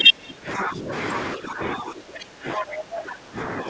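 From 0.0 to 0.92 s the speech dips and breaks up, by as much as about 25 dB. This is likely speech suppressed in double talk. The echo canceller turned the talker down along with the echo. It happens again from 1.35 s to the end, less deeply, about 15 dB. At 2.57 to 2.63 s a brief scrap of the other side's voice leaks through, about as loud as the speech. The canceller likely failed to remove it.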